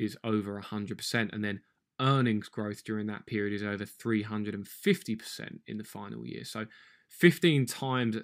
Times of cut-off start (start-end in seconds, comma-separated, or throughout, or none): none